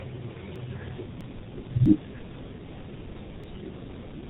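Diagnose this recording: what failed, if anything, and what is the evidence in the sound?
The codec stage is at fault throughout. The whole clip shows heavy G.723.1 codec damage at 6.3 kbit/s. Nothing passes above 4 kHz, so the speech sounds muffled and hoarse. Consonants blur because the codec's slow voice model cannot track quick changes.

Sudden jumps ahead occur at 0.56, 1.21, 1.86 and 3.44 s. Each skips roughly a tenth to a third of a second, with no silent gap. The likely cause is a dropped buffer (overrun): samples were overwritten before being read.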